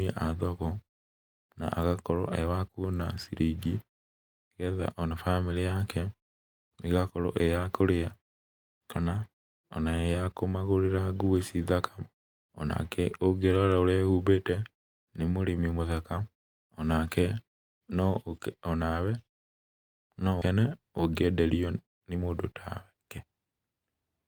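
A speech recording with three timing faults. From 19.47 to 20.03 s the sound stops dead and leaves about half a second of silence before carrying on where it left off. This is a call audio freeze, likely from delayed packets draining the jitter buffer: the concealment died away almost immediately, so nothing was lost, but a gap was inserted. Shortly after, at 20.40 to 20.44 s, playback jumps forward. Roughly 150 ms of speech is simply gone, and the two sides are spliced together with only a tiny join. This skip ahead cut audio while later audio was already waiting and took back part of the delay the freeze had added. Finally, from 21.65 to 24.02 s, the talking sounds hurried while the pitch stays unchanged, running at about 115% speed. This is a jitter buffer speed-up, trimming roughly 0.4 s in total by repeatedly removing short pitch-period slices to bring the buffer back toward its target, while the quiet gaps between phrases fall to silence as muted pauses.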